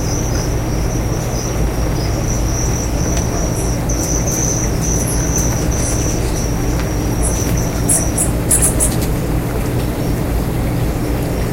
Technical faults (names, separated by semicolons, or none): hard clipping